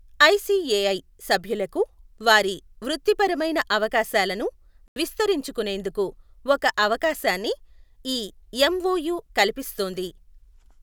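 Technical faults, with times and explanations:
4.88 to 4.96 s, Bluetooth stall: the speech drops to silence for about 81 ms after "సభ్యులకు వారి వృత్తిపరమైన అవకాశాలను" and resumes at "విస్తరించుకొనేందుకు ఒక అవకాశాన్ని". The likely cause is interference delaying wireless packets, so the headphones' buffer emptied and playback paused until the resent audio arrived.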